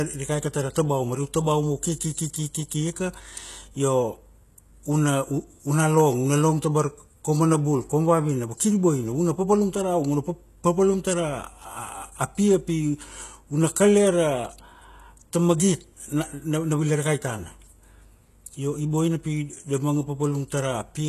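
The treble of the speech is rebuilt rather than coded throughout, likely by HE-AAC compression, with damage heavy enough to fit a bitrate near 16 kbps. Nothing survives above 12.3 kHz, and the copied upper bands misalign with the harmonics below, so s sounds turn gritty, metallic and lispy.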